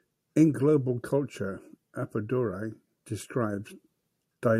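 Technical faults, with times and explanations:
No technical faults are audible anywhere in the speech recording.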